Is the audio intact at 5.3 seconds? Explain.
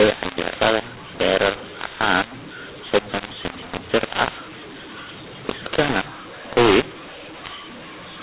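No, the mu-law and A-law mix-up runs through the whole clip, including 5.3 s. Speech coded as mu-law is decoded as A-law, so sample levels are scrambled: the speech sounds harsh and distorted, and quiet moments fill with noise instead of silence.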